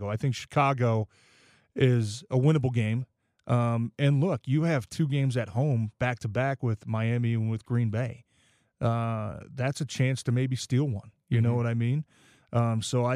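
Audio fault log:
No faults are heard anywhere in the speech recording. There is nothing here to enter in the log.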